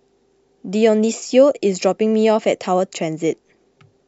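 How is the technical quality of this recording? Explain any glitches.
No technical faults can be heard anywhere in the signal of this speech recording.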